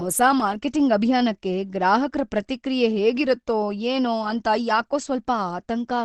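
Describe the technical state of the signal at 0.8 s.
At 0.8 s the speech sounds muffled and hoarse, with nothing above about 12.3 kHz. This runs through the whole clip. It is likely Opus compression in its speech-oriented mode, at a rate that points to about 16 kbps. A spectrogram shows a flat ceiling.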